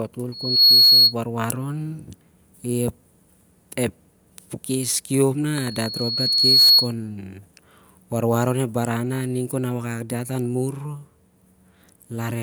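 Loudspeaker feedback squeal hits this speech clip twice, from 0.32 to 1.15 s and from 5.55 to 6.93 s, each time a single 4.3 kHz tone roughly 15 dB above the speech. The microphone is picking up its own loudspeaker, and at that frequency the loop gain exceeds one, so the tone feeds itself. It swells within a fraction of a second the first time and over about a second the second time.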